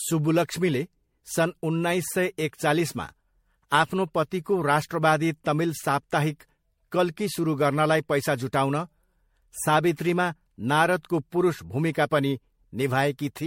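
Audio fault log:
throughout: generation loss. The speech sounds swirly, hollow and smeared, with blurred consonant attacks and nothing above 16.5 kHz. This is likely from around five MP3 passes at what fits 64 kbit/s. One encode at that rate would sound far less hollow.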